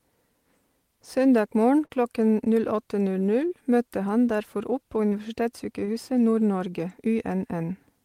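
Speech with four short concealed packet losses, at 1.85, 3.47 (just before "møtte han"), 5.09 and 5.85 s. Each 20 to 40 ms gap was filled by continuing the preceding sound. Each leaves a brief smear.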